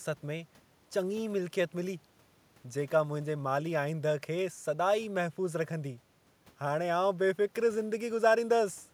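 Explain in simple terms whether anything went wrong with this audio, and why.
Nothing went wrong here.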